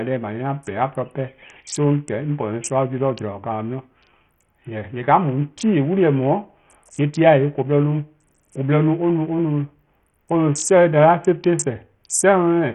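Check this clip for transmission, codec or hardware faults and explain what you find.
Heavy codec damage runs through the whole of this speech recording, most likely from Bluetooth SBC compression. Nothing survives above about 11.9 kHz, and the upper treble flickers in and out while a gritty, grainy noise and aliasing ride on the sound. With a small bit pool, the top sub-bands are starved of bits and everything else is coarsely quantised, which fits a rate near 48 kbps. A spectrogram shows a hard ceiling at 11.9 kHz with patchy, blotchy energy just below it.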